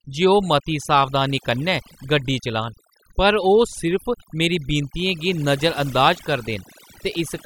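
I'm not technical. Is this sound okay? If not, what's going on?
No. Throughout, the speech sits over a near-silent background with twinkling specks: overdone noise removal, where cleanup set too strong also erased quiet parts of the voice.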